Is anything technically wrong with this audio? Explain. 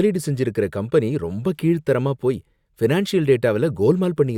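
No, nothing technically wrong can be heard here.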